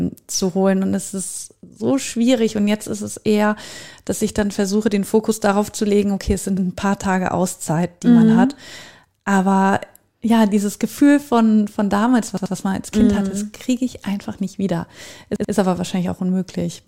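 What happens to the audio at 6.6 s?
A short stutter at 6.57 to 6.66 s: a piece of about 85 ms plays twice, with a hard join where the repeat starts. This is a repeated buffer. New audio arrived late, so the device replayed its last block, which fits a 4096-sample buffer.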